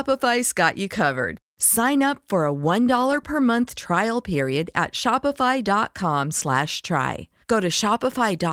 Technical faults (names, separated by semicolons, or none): lost packet rebuilt from error correction